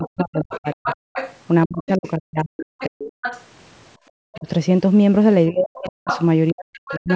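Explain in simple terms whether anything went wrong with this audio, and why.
The talker's voice sinks, goes dull or breaks into pieces from 0.0 to 0.89 s, 1.66 to 3.24 s, briefly at 4.36 to 4.47 s, and again from 5.51 to 7.09 s. This is speech suppressed in double talk, likely because both people spoke at once and the echo canceller turned everything down.

A second, fainter voice from the other end of the call can be heard underneath, from the start to 2.1 s, from 2.79 to 3.44 s, and from 5.74 s to the end, where it is closest in loudness to the talker. This is the other side's voice leaking through, likely from the loudspeaker into the microphone without being fully cancelled.

Around 3.97 to 4.08 s the room sound drops out for a tenth of a second and then returns. This is background gated by the echo canceller, which briefly shut the microphone down while it thought only the loudspeaker was playing.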